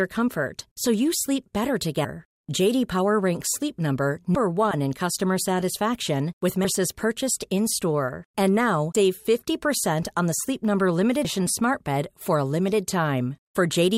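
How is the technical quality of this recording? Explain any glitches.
The recording has two kinds of glitch: one brief decoding burst and three regular skips.

At 4.71 to 4.74 s, just before "in customer satisfaction with", a brief glitch peaking around -15 dBFS cuts through. This is a corrupt frame decoded: damaged bits in a couple of compressed frames were played anyway, placing energy at wrong frequencies.

At 6.65 s (right after "in customer satisfaction with"), 8.95 s and 11.25 s the speech jumps forward abruptly, each time losing around a fifth of a second. This is likely audio missing between chunks, with pieces dropped at handovers between chunks of about 2.5 s.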